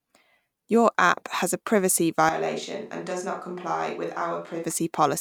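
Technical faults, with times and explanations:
2.29–4.64 s, switch to a distant microphone: the speech abruptly turns roomy and hollow, loses low end and drops by about 10 dB, with room noise rising to roughly 35 dB below the speech, likely because the close microphone dropped out, leaving a farther one.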